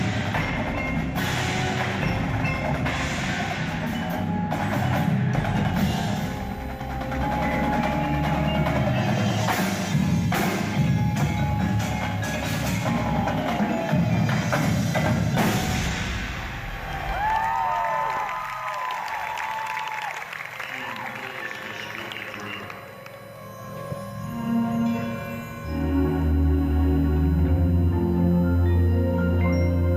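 USB whine enters at 6.31 s and runs to the end: a fixed-pitch tone built on 1 kHz, loudest at its 14 kHz harmonic, sitting roughly 30 dB below the sound. Current drawn in 1 ms bus frames is leaking through shared power or ground.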